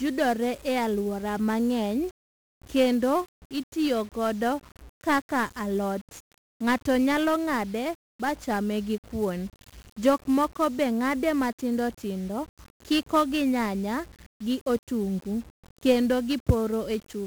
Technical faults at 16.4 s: 1-bit DFPWM compression

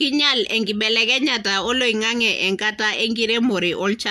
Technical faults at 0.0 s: none

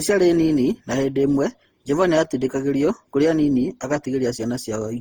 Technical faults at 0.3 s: generation loss

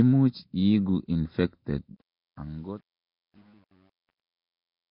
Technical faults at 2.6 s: Nellymoser compression; truncation distortion on a fade

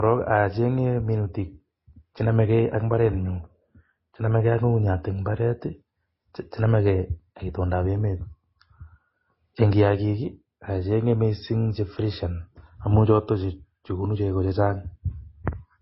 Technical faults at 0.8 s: transcoding between lossy codecs

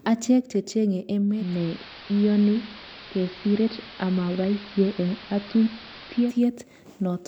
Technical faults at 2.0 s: digital radio blending to analogue

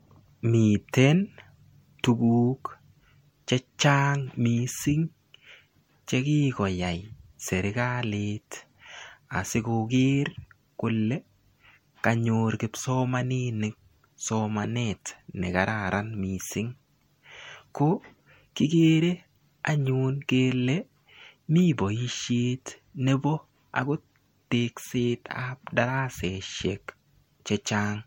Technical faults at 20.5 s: generation loss

